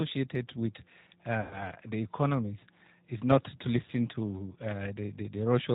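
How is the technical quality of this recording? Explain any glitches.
The recording has two problems: audible low-bitrate speech-codec damage throughout, and one packet-loss glitch early on.

G.729 codec: Across the whole recording, nothing above 4 kHz gets through, and the speech sounds rough and slightly synthetic. That fits an 8 kbit/s codec rebuilding each 10 ms frame from a vocal tract filter, a pitch predictor and a few pulses. A plain band-limit would sound muffled but clean, not rough like this.

VoIP packet loss concealed by the speech codec: From 1.41 to 1.66 s, just before "the economies is not", the sound smears into a stretched, fading sound. It points to about 100 ms of lost packets. The decoder stretched its last pitch and filter while lowering the gain. Because each frame builds on the one before, the speech stays weak after packets return. A simple dropout would leave silence or a click instead of this sustained, decaying sound.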